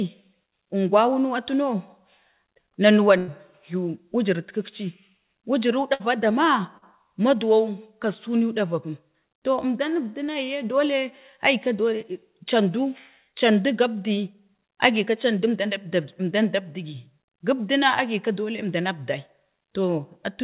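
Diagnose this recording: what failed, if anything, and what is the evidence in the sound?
Network stage, burst of packet loss. At 3.18 s the sound freezes into a held, fading continuation until about 3.30 s. Roughly 100 ms of real audio is gone, and the sound resumes further on. The same happens at 5.94 s, lasting to about 6.02 s, with about 60 ms lost. Several consecutive packets arrived too late or not at all. The jitter buffer extended the last sound and faded it down, then skipped ahead.

Network stage again, short concealed packet loss. At 6.78 s a brief smear lasts about 40 ms, ending near 6.84 s. The decoder filled it by continuing the preceding sound and then blended back into the real stream. The gap is short enough to register as a wobble rather than a dropout. The call path throughout stops at 4 kHz, which fits narrowband G.711.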